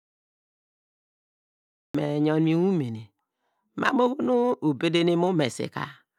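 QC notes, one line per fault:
0.00–1.95 s, cut-off start: nearly two seconds of dead digital silence, then at 1.95 s the speech bursts in partway through a sound, with no natural onset or fade-in. Capture began late, so the start of the utterance was lost and the waveform simply switches on.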